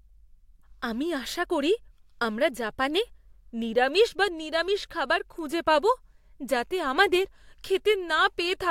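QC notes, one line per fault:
0.86–8.41 s, word clock ticks: the receiving device runs on its own clock, not locked to the sender's, drifting by roughly 15 ppm. The link slips one sample about every 1.5 s, giving around seven sharp, regularly spaced ticks through the speech.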